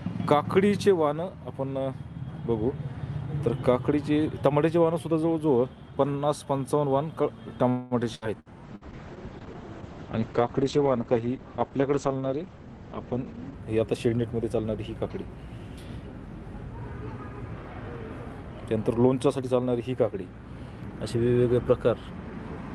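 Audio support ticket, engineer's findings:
Call audio freeze, 7.69–7.94 s. Likely packets held in transit and the jitter buffer running dry. Receiver stretches the last sound into a fading buzz/hiss for about 0.22 s. Nothing lost: playback resumes where it stopped, so the rest of the call runs about 216 ms later.

Burst of packet loss, three bursts: 8.15–8.25 s, 8.40–8.49 s, 8.76–8.84 s. Consecutive packets lost or too late. Concealment holds the last sound as a decaying buzz or hiss. Roughly 60 ms genuinely missing at each, so the sound jumps ahead on resume.

Call bitrate drop, 8.65–13.66 s. Bandwidth estimate collapsed and the Opus encoder was cut from 48 to 9 kbps, floor held about 5.0 s. Coarse coding plus audio bandwidth narrowed from 20 kHz to 8 kHz. Result: rough, watery, muffled sound until recovery.

Jitter buffer speed-up, 12.27–12.67 s at about 115% and 18.74–20.12 s at about 110%. 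Buffer over its target depth after bunched packet arrivals. Receiver repeatedly drops pitch-period-sized slices, around 70 ms and 150 ms in total. Pitch unchanged, but playback sounds hurried.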